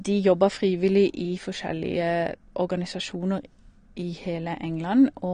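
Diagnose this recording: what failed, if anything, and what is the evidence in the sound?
The speech sounds dull and smeared from start to finish, with nothing above about 9.7 kHz, and the codec damage is plainly audible throughout the clip. The fault sits at the codec stage and is likely AAC compression (AAC-LC) at a low bitrate, which fits roughly 32 kbps. With so few bits per frame, the encoder drops the top of the spectrum and quantises the remaining frequency lines coarsely against its hearing model, blurring the detail.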